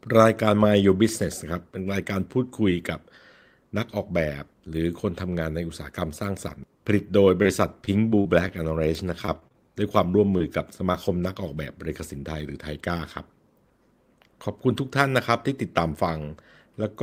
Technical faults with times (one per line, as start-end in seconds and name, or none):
7.42-7.48 short concealed packet loss
7.85-8.52 repeated packet loss (robotic sound)
9.26-9.55 repeated packet loss (robotic sound)
10.11-10.42 short concealed packet loss
10.92-10.96 short concealed packet loss